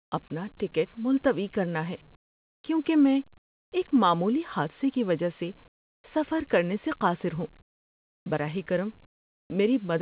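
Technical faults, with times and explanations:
0.00–0.12, 2.16–2.64, 3.38–3.72, 5.68–6.04, 7.62–8.26 and 9.06–9.50 s, comfort noise in place of the background: in each pause the real room tone, already about 33 dB below the loud parts, gives way to a flat, featureless hiss, about 20 to 31 dB lower, lasting 0.12 to 0.64 s. This is likely discontinuous transmission, with the receiver synthesising noise while the sender is silent. Unlike a noise gate, the pauses never fall to dead silence.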